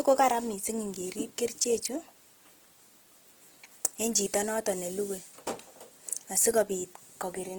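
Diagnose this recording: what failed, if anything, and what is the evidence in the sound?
Codec stage: Opus compression throughout, the speech going grainy and rough where noise fills starved bands. That likely points to a CELT-mode encode near 16 kbps.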